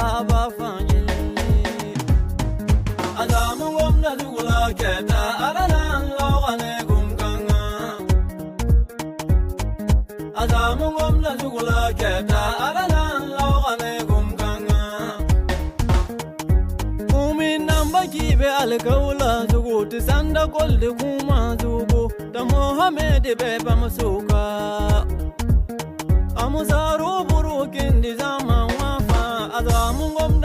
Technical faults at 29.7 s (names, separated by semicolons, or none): none